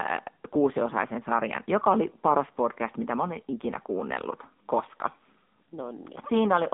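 The speech has been squeezed through the AMR narrowband mobile codec from start to finish. At its low bit rate, which fits AMR-NB's 7.4 kbps mode, the vocal-tract model leaves speech plainly buzzy and synthetic. The band runs only from 200 Hz to 3.7 kHz, with nothing above.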